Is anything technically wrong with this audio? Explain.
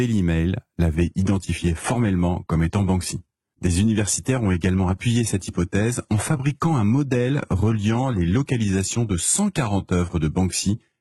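Yes. From 0.95 s to the end, the speech suffers an adaptive stream at a lower bitrate. The connection slowed, so the player switched without a gap to a much cheaper encoding, which fits a drop from roughly 96 kbit/s AAC to a 16 kbit/s HE-AAC stream. Swirly codec artefacts rise. On a spectrogram, content above 11.8 kHz vanishes abruptly at 0.95 s and the upper band looks smeared and patchy. The waveform shows no break.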